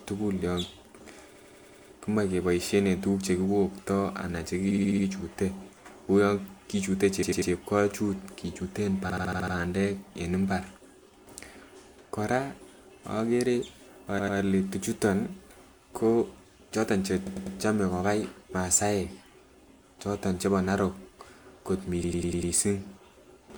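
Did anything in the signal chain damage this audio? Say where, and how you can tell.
Yes, repeated frames at the codec or storage stage. The speech stutters at 1.34–1.90, 4.70–5.05, 7.22–7.50, 9.09–9.54, 14.18–14.37, 17.26–17.55 and 22.04–22.53 s, replaying chunks of roughly 65 to 99 ms two to six extra times. Each one stretches the audio.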